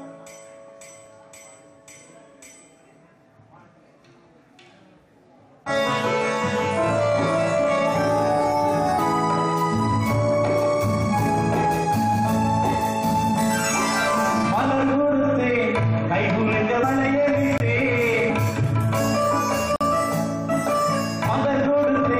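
At 8.98 s the decoder drops whole compressed frames, lost from the file or rejected as damaged. The sound jumps ahead roughly 70 ms, about three 23.2 ms frames. Further compressed frames skipped at 16.82 s and 18.29 s each cut about 100 ms.

From 17.58 to 17.60 s a block of zeros was played. The sound drops to digital silence for 23 ms, which fits a 1024-sample buffer. A second block of digital silence, 46 ms at 19.76 to 19.81 s, is heard as a short hole.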